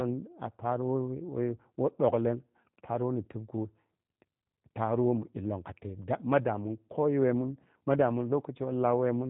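From start to finish the speech carries G.729 codec coloration, plainly audible throughout. The sound points to G.729A at 8 kbit/s: each 10 ms frame is rebuilt from a vocal tract filter, a pitch predictor and a sparse set of pulses rather than the original waveform. The result is intelligible but rough and faintly synthetic, with nothing above 4 kHz, so sibilants and breath lose their edge and the whole clip sounds narrowband and slightly buzzy.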